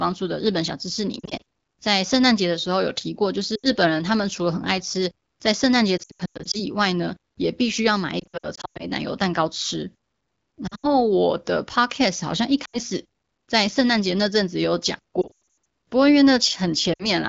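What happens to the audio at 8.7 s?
That's right inside a patch of lost AMR speech frames, 8.19 to 8.87 s. Corrupted frames get patched by repeating the last good settings at falling gain, so speech dips, warbles and briefly fades.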